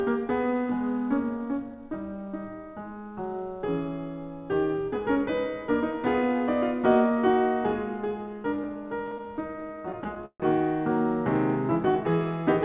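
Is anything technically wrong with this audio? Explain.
Yes. Between 8.36 and 10.42 s the music shows repeated stalls (stutter). About two dozen short hold-ups occur across that stretch, the longest around 142 ms, together adding roughly 405 ms of filled-in sound, about a fifth of the span. Packets arrived late, so the jitter buffer kept running dry, and the receiver stretched or faded the last sound each time instead of dropping anything. The passage drags and hiccups, heard through the G.711 mu-law call path's 4 kHz ceiling.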